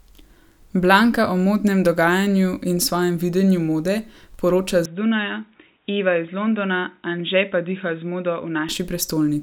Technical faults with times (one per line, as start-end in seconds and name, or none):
4.85-8.69 input switched to a poorer device